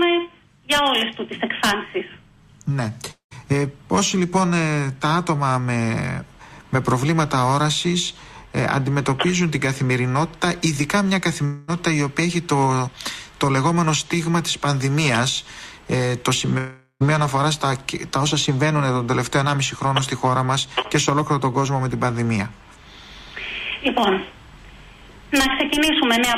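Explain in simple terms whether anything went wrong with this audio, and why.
A long network dropout is the likely cause of three gaps, at 3.11–3.33 s, 11.45–11.70 s and 16.58–17.02 s. Each time, the last sound is stretched into a fading buzz or hiss, briefly silent at the first and third, and the audio resumes with that stretch missing.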